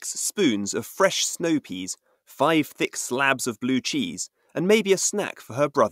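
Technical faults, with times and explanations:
No technical faults are present in this speech clip.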